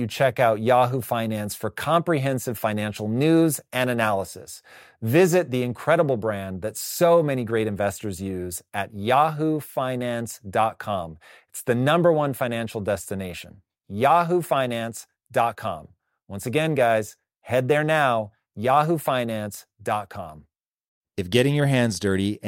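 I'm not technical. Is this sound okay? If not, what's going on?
Yes, nothing wrong can be heard anywhere in this speech recording.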